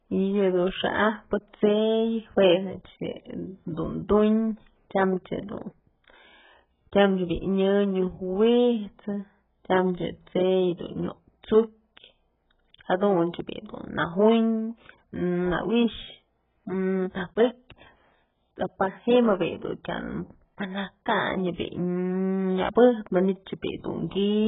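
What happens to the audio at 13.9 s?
At 13.9 s you're hearing the same damage that runs through the whole clip. The speech is dull and smeared, with nothing above 3.8 kHz, and there's a warbly, fizzy texture on sibilants. That's most likely heavy AAC compression, and the sound points to something like AAC-LC squeezed to around 8 kbps. At that rate the encoder drops the top of the spectrum and leaves holes or fills bands with substitute noise, which gives that watery smear.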